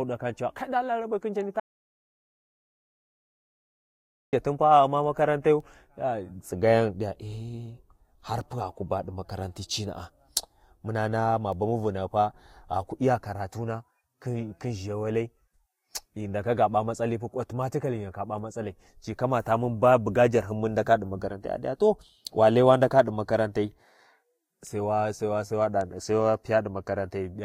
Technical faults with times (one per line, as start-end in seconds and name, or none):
1.60-4.33 audio dropout to silence